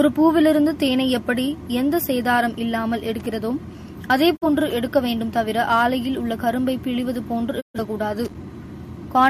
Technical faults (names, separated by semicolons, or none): loose connector crackle; digital broadcast dropout